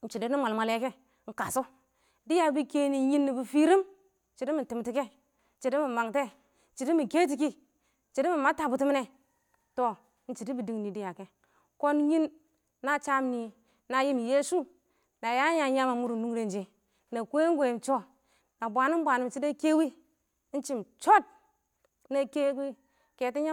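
No technical faults are audible anywhere in the recording.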